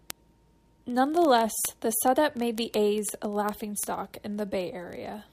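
Word clock ticks run from 0.10 s to the end: sharp clicks about every 30 ms, some two hundred in all. The receiver runs on its own unlocked clock, several hundred ppm off, so each slip drops or repeats one sample.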